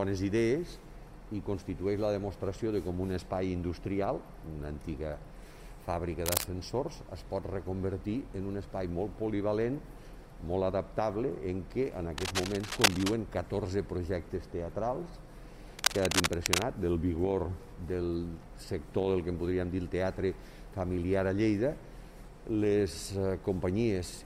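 Three bursts of cable scratch noise sit on top of the audio, at 6.26 to 6.44 s, 12.18 to 13.14 s and 15.79 to 16.64 s. Each is a dense, ragged crackle, roughly as loud as the sound itself, so it briefly competes with it rather than hiding underneath. The first is a short scrape, and the later two run closer to a second. The likely cause is a worn cable, connector or control being moved, with its contact resistance jumping about.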